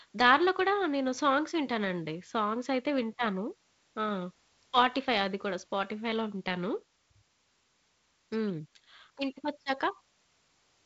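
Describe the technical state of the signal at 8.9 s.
At 8.9 s the speech is intact, passing through G.722 wideband telephone coding that is working normally, with its band ending around 7.8 kHz.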